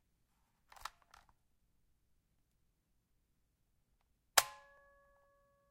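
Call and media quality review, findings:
Dropped samples, 4.78 s: single sharp click. On the waveform, an abrupt step where the signal jumps ahead by under a millisecond. On the spectrogram, a thin vertical line across all frequencies. Likely cause: samples discarded in a buffer handoff in the capture or playback path.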